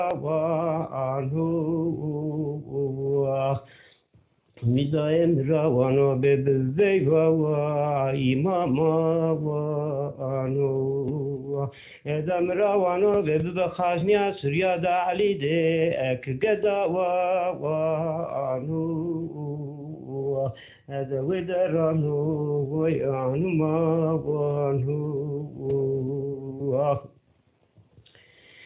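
No technical faults can be heard anywhere here.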